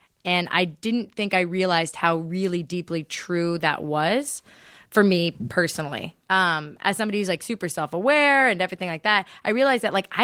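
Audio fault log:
Nothing to log here; this speech clip runs with no faults to report.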